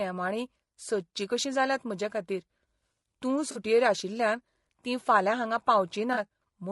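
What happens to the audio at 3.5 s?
From 3.51 to 3.57 s the sound turns briefly smeared and noisy, a blurred, phasey patch just before "आशिल्ल्यान तीं फाल्यां हांगा". This is AAC frame loss with concealment: about 40 ms of coded audio never reached the decoder, which fits two consecutive frames going missing. The decoder covered the gap by reusing the last good spectrum with scrambled signs or interpolated energy, so the hole is filled with a noisy copy.

Over that same moment, and across the whole clip, the sound is rough and grainy, with a hiss between the harmonics and a thin, artificial-sounding top band. The likely cause is low-delay AAC compression, the AAC-ELD type used for video calls, running at 32 kbps. Its short frames resolve pitch harmonics poorly, and at this bitrate the encoder fills the spaces between harmonics with noise and reconstructs the highs synthetically.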